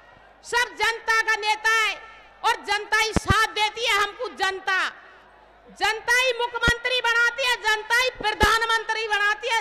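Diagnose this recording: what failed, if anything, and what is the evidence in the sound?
Loud pops from the analogue wiring. A double pop spans 3.17 to 3.33 s. Single pops follow at 6.68 to 6.71 s and 8.43 to 8.46 s, about 15 to 20 dB above the sound beneath. A voltage step, likely a plug or switch, becomes each thump.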